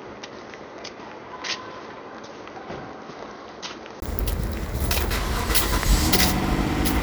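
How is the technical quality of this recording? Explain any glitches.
The recording has one clear fault: the first four seconds come through a poorer input path than the rest.

From 0 to 4.02 s the everyday sounds are dull and boxy, with nothing above 6.5 kHz, roughly 10 dB quieter, and carrying a noise floor around 40 dB below the signal. At 4.02 s a 20 ms gap opens and the full, brighter sound returns. This points to an input switched to a poorer device, likely a band-limited microphone or headset profile before the system changed back. On a spectrogram the top band is empty until a hard edge at 4.02 s. The waveform jumps up in level after a brief flat gap.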